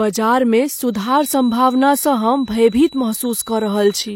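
From 0.88 s to the end of the clip at 4.16 s, a feedback whistle sits behind the speech: a single tone at 3.9 kHz, about 25 dB below the speech, slowly swelling and fading. The likely cause is a loudspeaker-to-microphone loop hovering just short of instability, so that one frequency keeps ringing. It differs from a full feedback howl because it never builds up, and from a fixed electrical tone because its level drifts.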